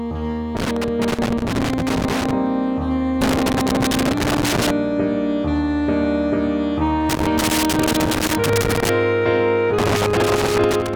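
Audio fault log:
0.57–2.31 s, 3.21–4.71 s, 7.09–8.89 s, 9.78–10.96 s: loose connector crackle. A worn contact keeps breaking the signal. Irregular bursts of scratchy crackle result.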